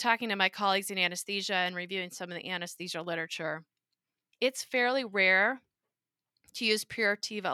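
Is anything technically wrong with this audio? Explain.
No, nothing technically wrong can be heard here.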